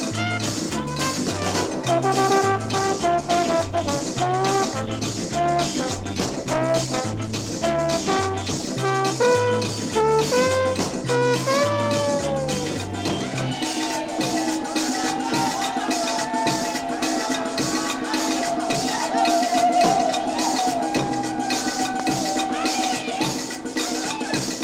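From 2.79 s to 8.81 s the sound turns coarser and rougher, with a watery, smeared texture and a duller top end, before clearing again. This is a call bitrate drop: the connection's bandwidth estimate fell and the encoder was pushed to spend far fewer bits, quantising more crudely and trimming high frequencies. The degradation suggests a fall from roughly 32 kbps to about half that, held at its lowest for nearly six seconds.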